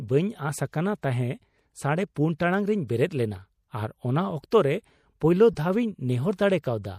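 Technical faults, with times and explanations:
Throughout: MP3 compression. Faint detail swirls watery, plainly audible, likely from low-bitrate encoding near 64 kbps starving the quieter frequency lines.
5.53 to 5.55 s: corrupt frame decoded. A brief burst of misplaced energy, peaking about -30 dBFS, sounds as one damaged frame plays with misread codes misplacing its energy.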